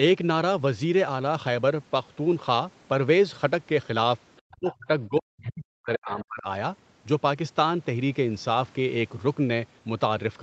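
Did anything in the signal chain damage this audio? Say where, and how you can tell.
Yes. The call processing stage let the other side's voice leak through. For two brief moments, 4.36 to 4.40 s and 6.20 to 6.25 s, a faint second voice surfaces under the talker, roughly 35 dB and then 25 dB below them. The likely cause is an echo canceller that left a residue of the loudspeaker signal in the microphone feed. At these lengths it registers as quick scraps rather than continuous speech.

The same stage also suppressed speech in double talk. From 4.41 to 4.88 s and again from 5.08 to 6.46 s, the talker's level falls away, by around 40 dB at its deepest, and then recovers. The second leak lands inside the longer dip. This is likely the canceller's suppressor failing to separate near-end speech from echo while both sides spoke, so it clamped the whole signal down. The band stopping near 8 kHz, consistent with Opus at 32 kbps, is the ordinary call path and plays no part in these dips.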